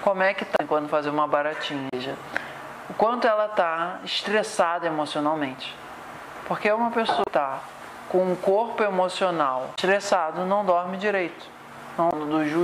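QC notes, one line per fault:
0.56–0.61, 1.9–1.94, 7.22–7.28, 9.74–9.79, 12.1–12.14 s: damaged data in a compressed stream. Corrupted frames make the decoder lose sync briefly, causing short glitches about 45–60 ms long.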